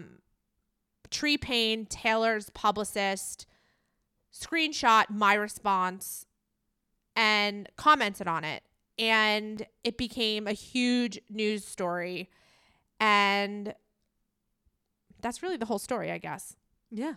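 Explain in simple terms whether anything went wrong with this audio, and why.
Dropped buffers (overrun) occur at 9.57 s, just before "it became a", then at 10.61 s, right after "it became a", and at 13.69 s. Each is a point where the speech jumps ahead, likely because the recording software missed a few milliseconds of sound before it was overwritten.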